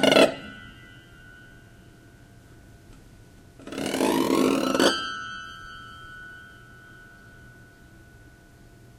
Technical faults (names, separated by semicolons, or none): repeated frames